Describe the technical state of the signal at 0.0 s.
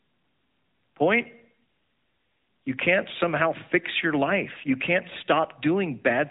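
At 0.0 s the speech already carries AMR narrowband mobile codec damage, present from the first sample to the end. The codec rebuilds the voice from a vocal-tract model excited by a few pulses per short subframe, so the sound is plainly thin and synthetic, in a way that fits a mid-rate mode near 10.2 kbps. On a spectrogram all energy stops at a hard ceiling around 3.8 kHz, with nothing above it.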